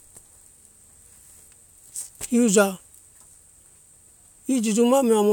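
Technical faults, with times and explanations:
Nothing stood out on listening to this speech recording.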